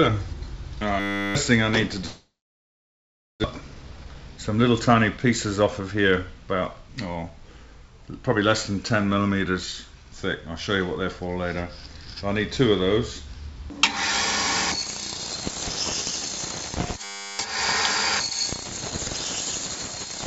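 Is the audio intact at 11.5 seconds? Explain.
Yes, the audio is intact at 11.5 seconds, with nothing there beyond the ordinary coding of a G.722 call path, which leaves nothing above 8 kHz.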